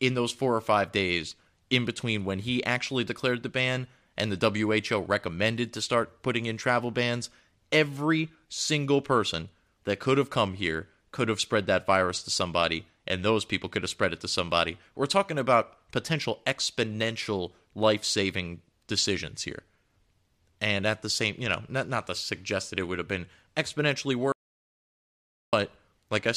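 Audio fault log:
24.32–25.53 s, audio dropout to silence: speech cuts off mid-flow into 1.21 s of silence with no room tone, likely from the input link dropping while recording continued.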